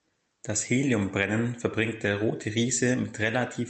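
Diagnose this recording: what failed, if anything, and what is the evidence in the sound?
Nothing in this recording failed.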